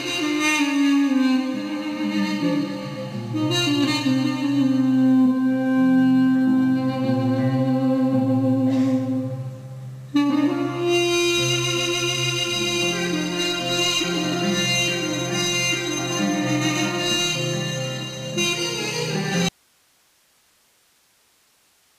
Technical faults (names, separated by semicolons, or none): audio dropout to a faint residue